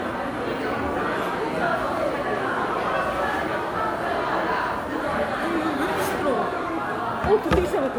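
Throughout the recording, the likely cause is generation loss: a lossy encode that fits WMA at 128 kbit/s, repeated about seven times, each pass requantising on a shifted frame grid. The errors accumulate into a swirly, hollow smear, with blurred attacks and nothing above 19.8 kHz.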